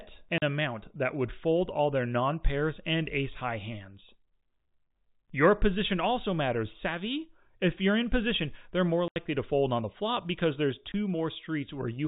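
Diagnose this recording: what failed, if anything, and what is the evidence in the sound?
Packet loss filled with silence, at the network stage. The speech drops out at 0.38 s for 40 ms, at 9.08 s for 80 ms, and at 10.92 s. Each hole has hard edges. All three lengths fit 20 ms packets, lost and replaced with silence.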